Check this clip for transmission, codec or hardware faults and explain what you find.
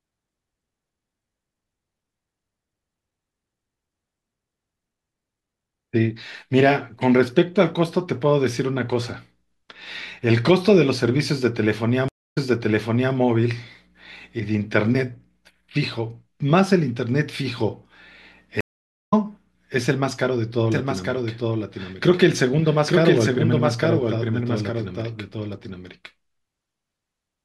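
Three faults are audible: two stream reconnects and a doubled audio track that runs to the end.

Stream reconnect, 12.08 to 13.15 s and 18.61 to 19.14 s. Each time the connection dropped, and the player restarted its decoder partway through the stream. The first gap lasts 278 ms, then playback resumes 784 ms earlier, so a stretch of speech repeats. The second is 514 ms of silence, after which the audio comes back about half a second later, so some speech is skipped.

Doubled audio track, 20.72 s to the end. From this point a second full-band copy of the speech is mixed in, about 5 dB quieter and roughly a second behind. It is likely caused by the same signal arriving again through a slower capture path. The copy has no reverberant tail or room colouring, so it sounds like a distinct, dry repeat rather than an echo. It starts abruptly and continues to the end of the clip.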